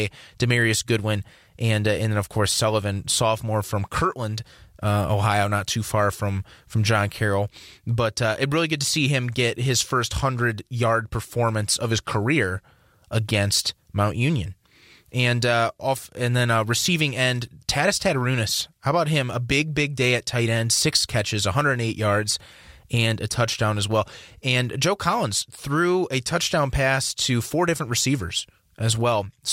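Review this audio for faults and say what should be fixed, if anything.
Nothing in the signal needs fixing, since no technical fault can be heard anywhere in the recording.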